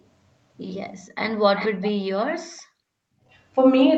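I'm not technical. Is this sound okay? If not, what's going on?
No. Around 1.06 to 1.11 s a very faint, brief delayed copy of the speech slips in, then a clearer one from 1.56 to 1.92 s. This is an echo leak, likely from the other side's loudspeaker, arriving about 0.48 and 0.36 s late. Between 2.49 and 3.27 s the room background drops away for roughly 0.7 s in total. That is background gated by the echo canceller, which turned the microphone down hard while sound played.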